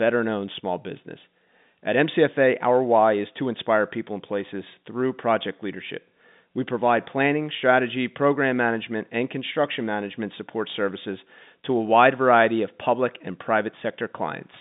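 No technical faults are audible in this speech; the telephone-band limit of roughly 150 Hz to 3.7 kHz is simply what G.711 telephone coding passes.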